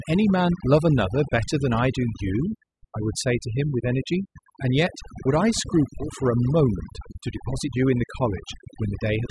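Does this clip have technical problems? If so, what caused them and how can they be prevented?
Yes. Overdone noise removal runs through the whole speech clip. The reduction was set too aggressively, so frequency bands near the estimated noise level are pulled far down or gated off, taking quiet speech detail with them. Pauses fall to near silence with twinkling specks. To prevent it, use gentler reduction settings and capture a cleaner recording at the source.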